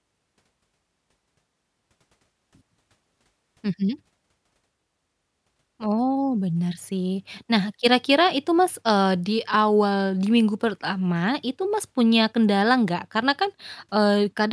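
Nothing technically wrong turns up in this speech recording; it just runs along with no faults to point to at any moment.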